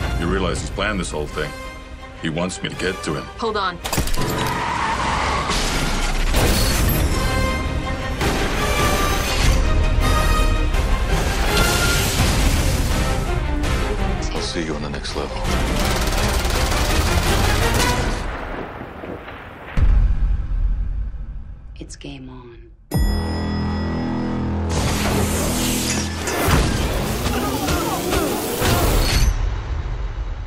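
Nothing in this audio calls for comment, as no technical faults turn up anywhere in it.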